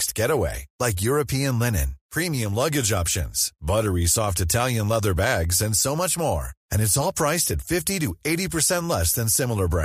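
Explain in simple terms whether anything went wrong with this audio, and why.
From 5.12 to 8.11 s the speech carries regular ticks every half second, a typical sign of periodic USB or driver dropouts, where the driver briefly stalls and drops tiny slivers of sound.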